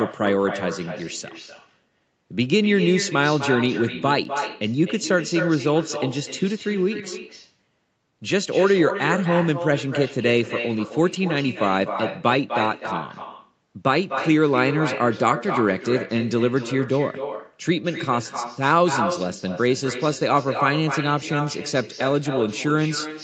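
Throughout the speech, an echo with no canceller trails every phrase. The far end's loudspeaker leaks into its microphone, returning a thinner copy about 8 dB down, roughly a third of a second late.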